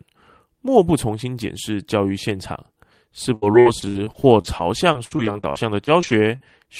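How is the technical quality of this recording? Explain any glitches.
The recording has one clear fault: repeated packet loss, producing a robotic sound in the speech from 3.35 s to 6.43 s. Across that stretch the stream drops out in a rapid series of short gaps, the longest about 65 ms, covering roughly a fifth of the span. Each hole is patched by extending the preceding sound, so the speech turns choppy and robotic, with fragments missing. The pattern points to a network path losing or delaying packets again and again.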